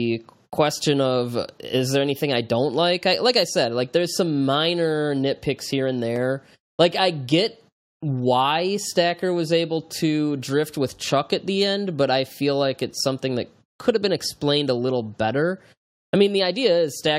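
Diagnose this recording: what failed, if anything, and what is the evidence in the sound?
Nothing in the chain seems to have failed here; the speech comes across steady and unbroken, with no point in the recording that gives a listener reason to suspect any stage along the way.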